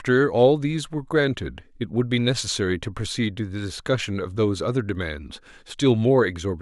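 The speech signal holds steady in level, timing and continuity throughout, with no audible technical fault anywhere in the recording.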